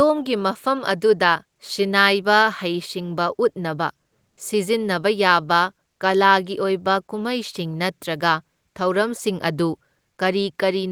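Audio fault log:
4.29 to 4.37 s, comfort noise in place of the background: for about 80 ms the real room tone drops out and a smooth, featureless hiss sits in its place, at the same level, so there's no dip, just a sudden loss of texture. The background here is very low, about 53 dB under the loud parts. It's likely discontinuous transmission, in the style of Opus DTX: the sender went quiet and the receiver filled the gap with synthetic noise.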